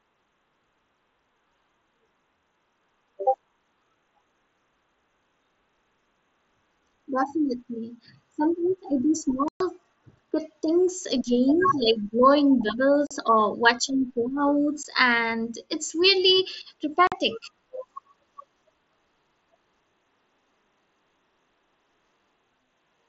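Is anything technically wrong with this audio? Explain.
Yes. Unconcealed Bluetooth headset packet loss cuts silent holes in the speech at 9.48–9.61 s (120 ms), 13.07–13.11 s, 14.83 s and 17.07–17.12 s. Headset packets were dropped and replaced with silence rather than filled in, so each gap starts and stops with an abrupt edge. Concealed loss would instead smear or repeat the surrounding sound.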